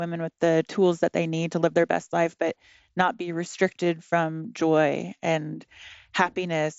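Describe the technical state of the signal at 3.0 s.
At 3.0 s the speech is intact, carried through a Bluetooth mSBC headset codec working as it should, with the band ending around 7.7 kHz.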